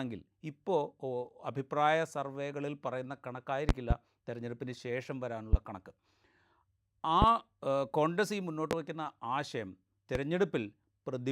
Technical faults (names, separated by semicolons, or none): loud pop